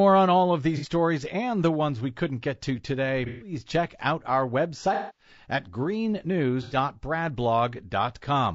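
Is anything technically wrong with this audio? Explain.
Yes. Throughout, the speech sounds rough and grainy, with a dulled top band. This likely comes from low-delay AAC compression at a low bitrate, around 32 kbps. Its short frames resolve harmonics poorly.

AAC frame loss with concealment occurs at 0.77 to 0.87 s after "on all of", at 3.26 to 3.52 s before "check out our", at 4.94 to 5.30 s after "check out our", and at 6.62 to 6.76 s. The decoder fills each gap from the last good spectrum, leaving a smeared, noisy or phasey patch.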